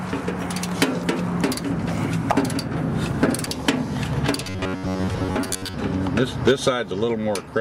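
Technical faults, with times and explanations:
3.44–3.48 s, damaged data in a compressed stream: a quick glitch where the decoder hits corrupted frames, loses sync, and hunts for the next valid header.
4.44–5.74 s, robotic sound from repeated short buffers: a rigid, metallic 94 Hz buzz, likely from roughly 11 ms chunks being looped while most of the real audio gets skipped.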